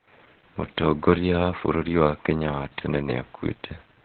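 Heavy Opus voice compression runs throughout: the SILK coder, starved at what sounds like about 8 kbps, narrows the band to 4 kHz, leaving the speech muffled, hoarse and faintly robotic.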